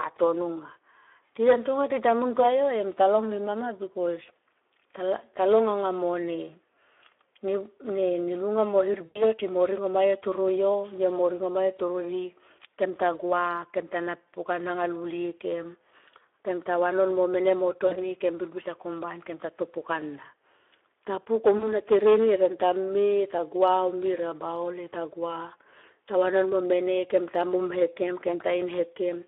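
This speech clip was carried through the Speex codec at 11 kbps over a line band of about 300 Hz to 3.5 kHz, so the excitation is starved of bits and the voice sounds plainly hoarse, grainy and muffled throughout. From 3.61 to 5.65 s, just after "talong nema", a loudspeaker feedback squeal appears: the microphone re-captured its own loudspeaker and the loop gain passed unity at 5.3 kHz, so a pure tone swells over roughly one and a half seconds to sit about 5 dB above the speech. VoIP packet loss concealed by the speech codec occurs three times. At 9.05 to 9.24 s, after "lunga mo", about 100 ms went missing, which fits five 20 ms frames. At 17.87 to 17.96 s, between "vanon mo mene mo" and "kem birbir", and at 21.57 to 21.77 s, about 40 ms was lost each time. In each case the decoder extrapolated from its last pitch and filter while lowering the gain, and the voice stays weak for a moment after the audio resumes.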